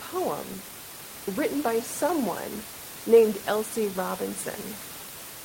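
No technical faults can be heard in this speech recording. Room noise sits in the background about 14 dB below the speech, as part of the recorded space.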